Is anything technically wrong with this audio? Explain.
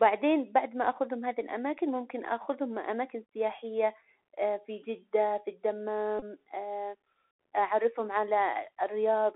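Yes, two faults are audible in this speech clip.

Throughout, the Bluetooth CVSD headset codec confines the speech to roughly 300 Hz to 3.4 kHz, which fits a 64 kbps one-bit-per-sample stream. The step size can't keep up with loud high sounds, so sibilants turn scratchy over a grainy hiss. On a spectrogram, nothing appears above 3.4 kHz, and a noise floor runs continuously underneath.

From 6.19 to 6.23 s, a Bluetooth headset packet repeat replaces about 26 ms of audio, scattered over 30 ms, with the longest run around 20 ms. The headset decodes the last good packet again, which points to several lost packets. The result is a brief buzz near 267 Hz, seen as short repeating waveform segments and a stacked horizontal line on the spectrogram.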